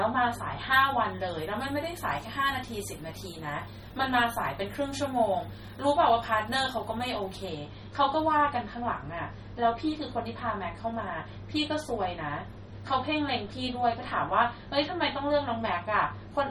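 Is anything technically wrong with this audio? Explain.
Yes. There are two problems.

Throughout the clip, the speech has a watery, swirling quality. Nothing is present above 17.2 kHz. Sibilants come out with metallic chirps, and consonant attacks sound smeared. The likely cause is MP3 compression at a low bitrate, which fits roughly 32 kbps. With so few bits, the encoder cuts the top band at a fixed point. It also drops weak frequency lines, and they flicker in and out from frame to frame. The damage is plainly audible.

From 0.73 s to 7.49 s, the treble is far too strong. At 10 kHz it sits about 10 dB above the level at 1 kHz. This is pre-emphasis left on. A treble boost was applied for recording or transmission, but the matching cut was never applied. The shape of the boost fits a 50 µs FM curve. The speech sounds thin, bright and harshly sibilant in this stretch.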